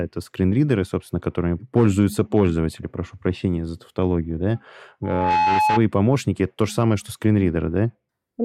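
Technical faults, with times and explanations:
5.03 to 5.82 s, loudspeaker feedback squeal: just after "прощения за тавтологию да", a single tone near 854 Hz swells over roughly a third of a second. It reaches about the level of the speech. The microphone is hearing its own loudspeaker, and the loop gain exceeds one at that pitch.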